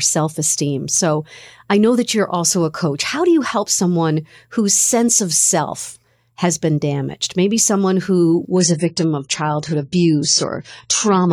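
At 8.50 s the speech suddenly loses quality, and it stays degraded until the clip ends at 11.32 s. This is an adaptive stream at a lower bitrate. The connection slowed, so the player switched to a cheaper encoding of the same audio. There is no gap at the switch. The treble is cut off above 10 kHz, and codec artefacts become more audible. The change fits a drop from roughly 96 to 24 kbit/s AAC.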